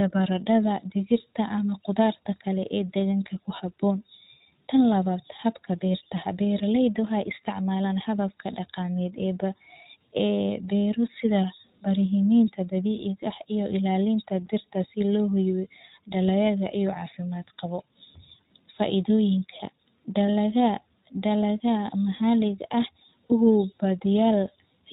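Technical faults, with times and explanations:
Throughout: iLBC codec. The speech runs through a narrowband coder at 15.2 kbps in 20 ms frames, so nothing above 4 kHz survives and the voice has a thin, slightly rough, synthetic edge. Each frame's excitation is coded independently, and the coding damage is plainly audible.
14.46 s and 24.47 s: gap between chunks. A hole of about 7 ms interrupts the sound at each join. The two joins fall 10 s apart, which points to the audio being handled in 10 s chunks with a short stretch of silence left between them.
20.27 to 20.30 s and 23.26 to 23.33 s: lost iLBC frames. The decoder fills the missing audio, 20 ms and then 40 ms, by repeating the last pitch cycle with added noise, heard as a brief held, buzzy vowel. Because frames stand alone, the voice returns to normal immediately afterwards.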